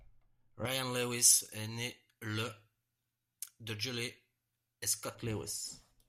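From 0.65 to 5.15 s, pre-emphasis is left on. The treble boost was never undone, lifting 10 kHz about 11 dB. The speech turns thin, bright and sibilant.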